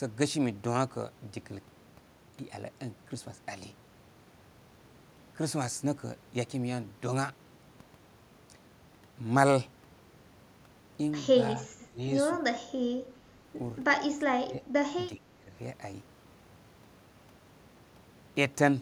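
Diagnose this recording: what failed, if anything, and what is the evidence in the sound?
The echo leak sits in call processing. At 11.82 to 11.86 s a faint delayed copy of the speech surfaces, about 25 dB below it and 379 ms late. That is likely an echo canceller letting loudspeaker pickup through. A discrete copy at one delay is what separates it from room reverberation.

Speech suppressed in double talk is also a call-processing fault. The talker's level dips by around 15 dB at 11.9 to 11.99 s, 14.27 to 14.63 s and 15.16 to 15.51 s, likely the canceller ducking during simultaneous talk. The speech drops partly rather than going fully silent, unlike network dropouts.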